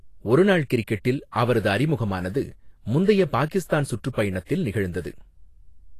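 From start to finish the speech carries plainly audible grainy hiss in the treble, with nothing above 14.2 kHz, most likely Vorbis compression at a low bitrate near 32 kbps. Unlike a plain low-pass, the upper band isn't simply dull. Its detail is replaced by noise of similar energy, roughening tones and blurring attacks.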